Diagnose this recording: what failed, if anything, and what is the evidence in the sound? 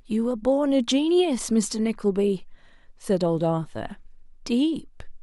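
Nothing in the speech signal points to a failure at any stage of the chain: the level holds steady, the waveform stays continuous, and no stage has left an audible mark on the sound.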